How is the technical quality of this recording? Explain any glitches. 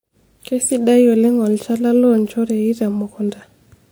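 The speech carries stacked compression artefacts throughout. Transcoding between lossy codecs, likely: throughout, the artefacts of one encoder sit under another's, consistent with WMA then HE-AAC, with nothing above 20.4 kHz.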